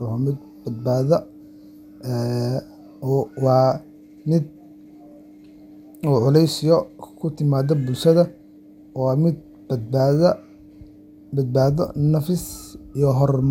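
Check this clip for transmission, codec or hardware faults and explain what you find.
The speech carries generation loss from start to finish. Its swirly, hollow smear and blurred consonant onsets, with nothing above about 16.7 kHz, point to an MP2 stream near 128 kbit/s, likely re-encoded about seven times. A single encode at that rate would sound far cleaner, so the stacked damage gives away repeated passes.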